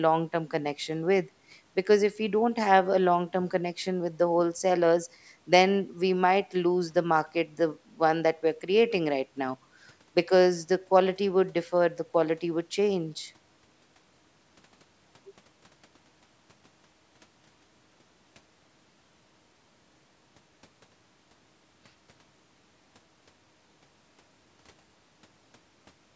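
No technical faults are audible.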